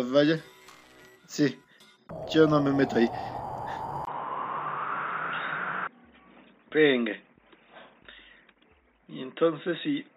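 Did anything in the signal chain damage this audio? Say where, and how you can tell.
Yes. At 4.05 s the sound drops out for about 20 ms, then comes back dull and boxy, with nothing above 3.8 kHz, and stays that way to the end of the clip. The loudness barely changes, but a faint new noise floor appears well below the signal. At the driver or device stage, this points to the input likely being switched to a poorer device, such as a narrowband headset profile, with its own band limit and noise.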